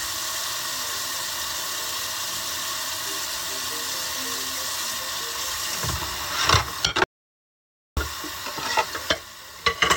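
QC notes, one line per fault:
7.04 to 7.97 s, audio dropout to silence: the sound cuts out mid-flow and comes straight back about 0.93 s later, and the gap in between is silent with no room tone left. That flatness is the giveaway. It likely comes from the input being lost for a moment, from a dropped link, a device disconnect or a stray mute, while the recorder kept writing silence, so whatever happened in that stretch is simply gone.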